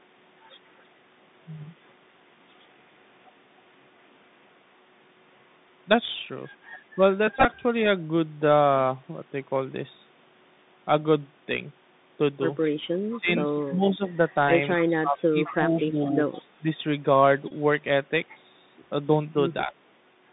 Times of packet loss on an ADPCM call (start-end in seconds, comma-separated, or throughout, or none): none